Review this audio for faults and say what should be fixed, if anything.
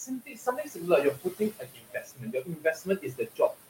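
Noise suppressor artifacts run through the whole clip. The suppressor pushes down the background by about 18 dB in each band it judges to be steady noise. It makes that decision frame by frame. The room noise, which sits about 13 dB below the speech, sinks in the gaps and swells back under the speech. To prevent this, lower the suppression depth so it removes less than 18 dB.

Speech cut by the noise suppressor starts at 0.06 s and lasts to the end, about 3.7 s. The suppressor mistakes parts of the voice for noise and turns them down with the background. The deepest drop is about 21 dB. That is more than the noise itself is cut. The parts it turns down come out swallowed and faint. To prevent this, make the suppressor's speech detection more conservative so quiet speech energy is kept.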